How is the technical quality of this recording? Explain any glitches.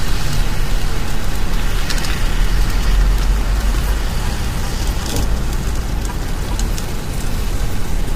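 Quality's compromised by compression from start to finish. Low-delay AAC compression, likely AAC-ELD at something like 32 kbps, leaves the sound grainy and rough, with nothing above 15.6 kHz.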